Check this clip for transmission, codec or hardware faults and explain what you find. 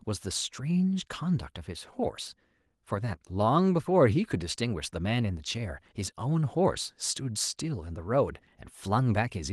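No faults detected here.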